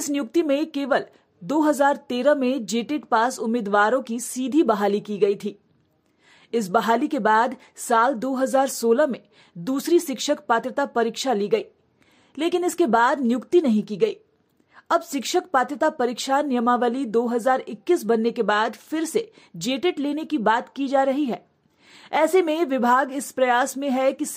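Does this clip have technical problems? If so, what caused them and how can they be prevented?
No, nothing in this clip points to a technical fault. There is no cause to trace and nothing that needs preventing.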